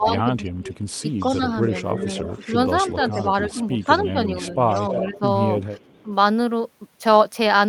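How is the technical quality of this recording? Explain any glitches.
The quality is poor, with two recurring call-path faults.

From 0.0 to 5.23 s, speech suppressed in double talk, likely from an echo canceller ducking during overlap, dips the speech by up to about 15 dB over roughly a second and a half. A brief 10 dB dip recurs at 6.03–6.09 s. The waveform shows sudden envelope notches.

Echo leak appears at 0.18–4.13 s and 4.74–6.03 s. A copy delayed about 316–317 ms trails the speech at roughly 15 dB, then 10 dB, below it, likely from incomplete loudspeaker-echo removal. The spectrogram shows faint, time-shifted duplicate harmonics.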